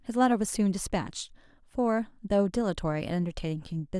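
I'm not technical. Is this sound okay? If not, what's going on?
Yes, nothing technical in this recording stands out as a problem, so you can listen to it as it is.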